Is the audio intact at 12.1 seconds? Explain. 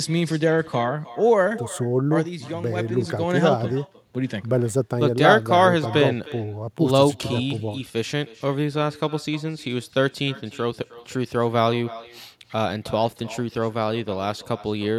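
No. With no echo canceller, the far end's loudspeaker feeds back into its microphone throughout, so the speech is shadowed around a third of a second later by a thin copy about 18 dB quieter.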